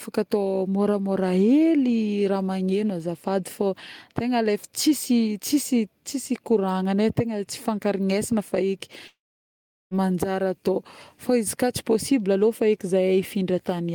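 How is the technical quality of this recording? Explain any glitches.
There's one clear glitch, at 9.07 s, and it sounds like a long network dropout. The speech cuts off there, the last bit of sound stretches into a short buzzy or hissy tail that fades quickly, and then there's about 0.74 s of silence before the speech picks up again at 9.94 s. Roughly 0.84 s of speech is simply gone. The likely cause is that packets stopped arriving, so the receiver briefly padded the gap by extending the last sound, gave up, and rejoined the stream further on without recovering what was lost.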